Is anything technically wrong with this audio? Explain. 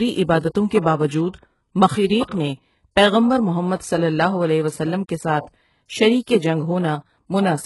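Yes. Throughout, the speech carries heavy HE-AAC compression damage, likely from a very low bitrate near 12 kbps. The treble is synthesized from copied lower bands and stops at 11.5 kHz, so s sounds turn gritty and metallic rather than simply dull, as they would with plain low-pass filtering.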